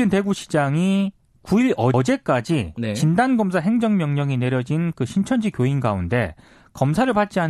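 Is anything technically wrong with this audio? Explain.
Yes, there's one fault: repeated frames. At about 1.94 to 2.04 s, a block of roughly 105 ms of the speech plays twice in a row, so you hear a quick stutter where that fraction of a second comes round again. That block length fits a run of four compressed frames being written or sent twice, and the decoder simply plays whatever it receives. The repeat also makes the clip about 0.1 s longer than it should be.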